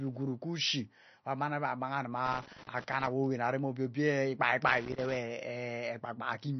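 Throughout the speech, nothing is present above 6.1 kHz, and the sound is plainly watery and swirly, with smeared consonant attacks. The likely cause is MP3 compression at a low bitrate, around 32 kbps: short of bits, the encoder cuts the treble and lets weak frequency components flicker between frames.

From 2.26 to 3.07 s, just before "awowan arem obie obie", and again from 4.67 to 5.16 s, right after "arem obie obie ikpai", irregular bursts of loose connector crackle appear. A faulty contact is rapidly breaking and remaking the signal path, chopping the audio into scratchy crackle.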